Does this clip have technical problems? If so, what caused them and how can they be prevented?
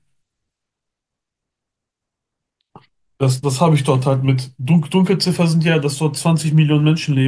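No, no technical problems can be heard in this speech clip. There is nothing here that needs a cause traced or a fix put in place.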